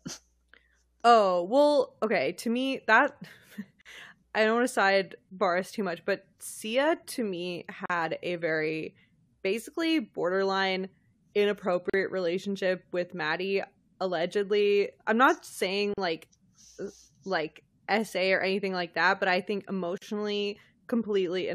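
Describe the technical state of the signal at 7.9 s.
After "to me", 7.86 to 7.90 s holds a gap at a join of encoded pieces. Untrimmed encoder padding leaves 40 ms of silence with smeared edges.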